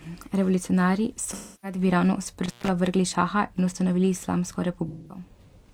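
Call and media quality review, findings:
AAC frame loss with concealment, 1.33–1.78 s: speech turns smeared and noisy for about 300 ms, consistent with roughly seven lost AAC frames. The decoder rebuilds the gap from the last good spectrum, so the speech goes phasey rather than silent.

AAC frame loss with concealment, 4.88–5.24 s, just after "ustanovili islamsko": same smeared, phasey fill, about 210 ms of lost audio, pointing to around five dropped frames, masked by spectral repeat with randomized phase.

Intermittent contact, 2.46–2.68 s, just before "vrgli šaha": signal cuts out for about 146 ms with crackle at both edges and faint hiss in the gap. Probable loose cable or connector briefly opening the analogue line.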